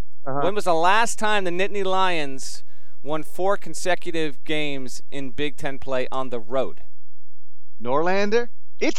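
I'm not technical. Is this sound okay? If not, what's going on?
No. The speech carries a DC offset throughout: the whole waveform sits shifted away from its centre line by a constant amount. You can't hear it directly, but it wastes loudness headroom and adds a steady, inaudible push at the very lowest frequencies.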